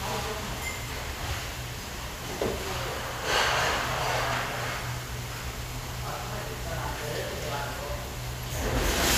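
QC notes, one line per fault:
4.80–4.83 s, corrupt frame decoded: a brief blip lasting about 22 ms, roughly the span of a single compressed frame. Bits inside that frame were damaged, but the decoder played it anyway. Misread gain values and spectral codes sent energy to the wrong frequencies, producing a short foreign burst that peaks at about -25 dBFS and stops as soon as the next intact frame is decoded.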